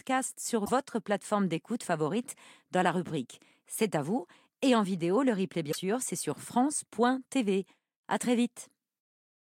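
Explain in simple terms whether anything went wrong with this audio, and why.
Damaged data in a compressed stream caused two brief faults. A short stretch of the compressed file was corrupted, so the decoder could not read those frames properly, lost its place, and had to hunt for the next clean starting point before the speech could carry on. Each time, that stumble comes out as a quick chirp or blip, once from 0.62 to 0.70 s and again from 5.68 to 5.75 s, each lasting under a tenth of a second.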